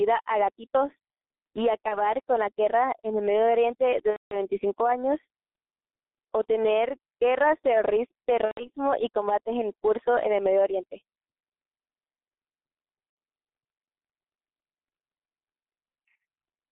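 The whole recording runs through a heavy G.723.1 codec at about 6.3 kbit/s, squeezed into a roughly 250 Hz to 3.7 kHz telephone band. The slow, coarse voice model leaves the speech muffled and hoarse, with smeared consonants and no air on top.

Then there's VoIP packet loss concealed by the speech codec at 1.88–2.00 s, 4.10–4.39 s, 8.45–8.70 s and 13.10–13.16 s. The decoder stretches its last pitch and filter into a fading buzzy smear. The 4.10 s gap sounds like about 210 ms of missing 30 ms frames, and the voice stays weak for a moment after each one.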